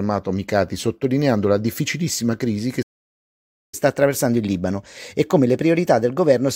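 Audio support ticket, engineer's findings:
Playback stall, 2.82 to 3.74 s: sound cuts out mid-flow for about 0.9 s, then resumes. Waveform shows a flat gap; spectrogram shows a full-band blank column with hard vertical edges. Likely cause is the player's buffer running dry or its playback thread being blocked, with output held silent until recovery.

Catch-up at higher speed, 3.74 s to end of clip: playback runs at 1.1x to work off the backlog. Pitch is raised about a semitone and a half and pacing is audibly quicker. Spectrogram shows harmonics and formant bands shifted upward, with events spaced closer in time. Waveform shows compressed periodicity. Mechanism: the player resamples the buffered audio to reclaim time lost in the stall, so speed and pitch rise together. It is still running when the clip ends.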